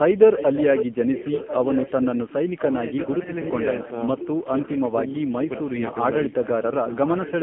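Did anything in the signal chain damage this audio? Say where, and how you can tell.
Yes. The codec stage damaged it throughout. This is the AMR narrowband mobile codec. Nothing passes above 3.4 kHz, and the band sits between 150 Hz and 3.4 kHz. The voice is buzzy and synthetic, with heavy coding damage. That fits a low rate of about 6.7 kbps.

The call processing stage adds an echo leak. A delayed copy of the voice trails it by 1.04 s, from 0.36 to 4.81 s and again from 5.23 to 5.95 s. It sits about 10 dB below the speech at first, then roughly 15 dB below. The likely cause is a loudspeaker echo canceller that let part of its microphone pickup through.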